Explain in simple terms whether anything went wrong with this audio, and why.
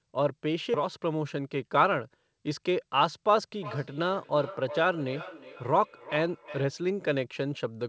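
Three things go wrong in this speech.

At 0.74 to 0.76 s there is a skip ahead. Around a second of speech is dropped, and the talking jumps straight to later audio with almost no gap. The cut is sudden, so the words on either side run together.

From 0.97 to 2.10 s comes a jitter buffer speed-up. The call had built up extra waiting audio, so it trimmed tiny slices to catch up. Speech plays about 9% faster at the same pitch and sounds a little rushed.

From 3.61 to 6.80 s there is feedback echo between two devices. Two devices in the same room are on the call. One plays back what the other's microphone sends, and that microphone picks it up again. Words return roughly every 0.4 s, quieter and thinner than the speech.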